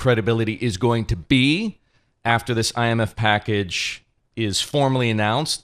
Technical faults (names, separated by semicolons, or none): DAB burbling